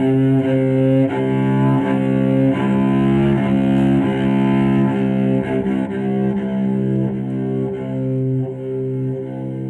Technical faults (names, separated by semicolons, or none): none